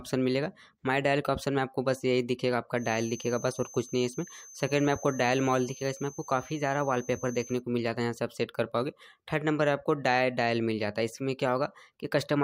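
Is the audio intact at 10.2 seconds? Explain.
Yes, the audio is intact at 10.2 seconds, with no dropout, click, distortion or other fault at that moment.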